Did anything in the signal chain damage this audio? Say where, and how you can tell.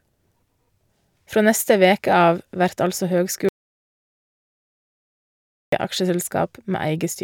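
Yes. Audio dropout to silence, 3.49–5.72 s, after "veke av vert altså": speech drops to silence without room tone, likely a lost input link.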